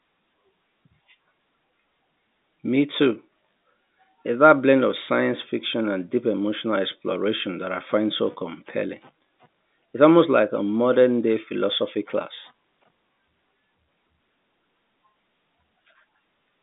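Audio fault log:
The speech arrives as ordinary G.711 telephone coding, with the band running from about 150 Hz to 3.7 kHz, nothing present above 3.8 kHz, and a spectrum that fits a 64 kbps A-law line, and no faults are present.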